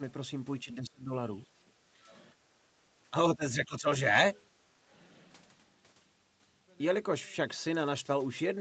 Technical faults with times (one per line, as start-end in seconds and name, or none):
0.64-1.11 speech suppressed in double talk
1.71-2.08 background gated by the echo canceller
2.34-2.66 background gated by the echo canceller
3.10-3.87 speech suppressed in double talk